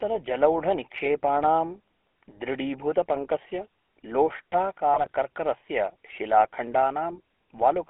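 GSM full-rate codec, throughout: the speech is rebuilt from a vocal-tract model driven by sparse regular pulses, leaving a buzzy, gravelly roughness and a narrow band of roughly 250 Hz to 3.4 kHz.

GSM bit errors, 4.94 to 5.11 s: corrupted filter, pitch and gain values distort several consecutive frames, so the speech breaks into squawks, pops and gargling before recovering.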